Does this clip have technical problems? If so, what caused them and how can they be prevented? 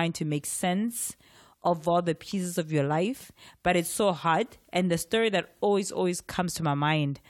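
No, there are no technical faults to report in this clip. Since nothing went wrong, there is nothing here that needs preventing.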